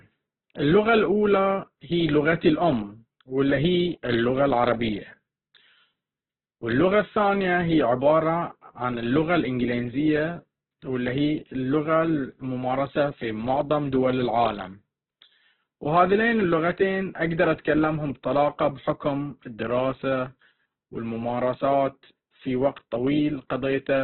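Speech throughout sounds narrow, rough and grainy, with nothing above 4.2 kHz, likely from heavy Opus compression in CELT mode at a very low bitrate, near 8 kbps.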